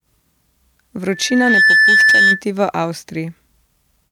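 Loudspeaker feedback squeal runs from 1.08 to 2.43 s: the microphone hears its own loudspeaker, and at 1.8 kHz the loop gain tops one, so a pure tone swells over about half a second into a squeal roughly 10 dB louder than the speech.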